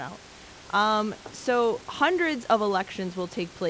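Nothing in this recording sounds technically faulty.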